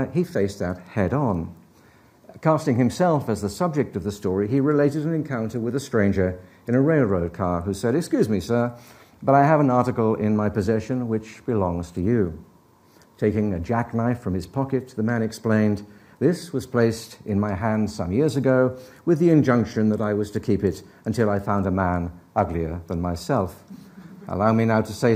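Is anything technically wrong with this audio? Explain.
No, nothing technically wrong can be heard here.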